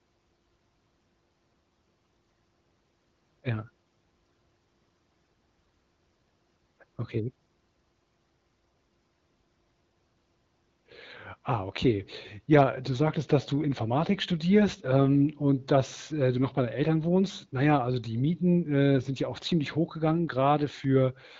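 No technical faults can be heard in this recording.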